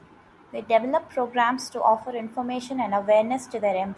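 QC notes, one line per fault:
No fault found, so there are no QC notes to give.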